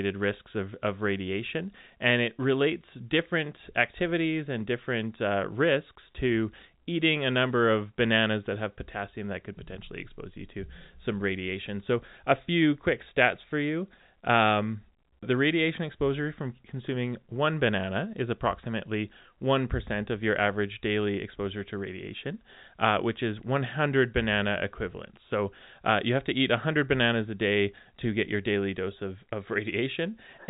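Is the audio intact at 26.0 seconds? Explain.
Yes, at 26.0 seconds the audio is intact, carrying only the normal band limit of G.711 telephone coding, with nothing above about 3.8 kHz.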